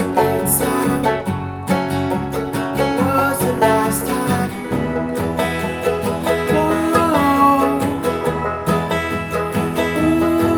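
No technical faults can be heard anywhere in the audio; the signal stays steady and intact throughout.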